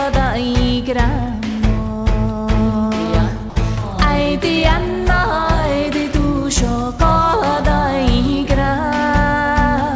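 At 3.50 s the sender's voice detector likely judged the sound as background and stopped sending, so a dropout from the voice detector replaces 60 ms with steady comfort noise before the sound resumes.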